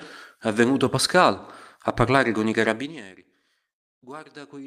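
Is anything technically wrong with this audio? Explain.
No, nothing here stands out as a technical problem; this speech sounds just as it should.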